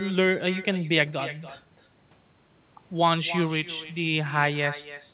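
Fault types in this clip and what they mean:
Echo with no canceller: The far end is playing the call out loud, their mic is picking it back up, and nothing strips it out, so every phrase returns as a fainter, thinner copy. Here it trails the speech by roughly a third of a second, sitting about 15 dB down, all the way through. The call sound is narrowband, stopping at 4 kHz like a telephone codec would.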